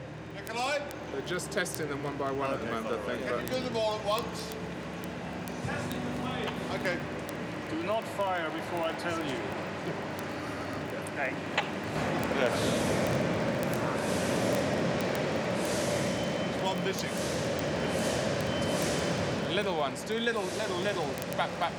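From 0.12 s to 21.79 s, word clock ticks run throughout, roughly every 20 ms, about a thousand in all. An unlocked receiver, with clocks apart by about 0.1%, drops or repeats one sample at each slip. The spectrogram shows evenly spaced thin vertical broadband lines, and the waveform shows single-sample steps.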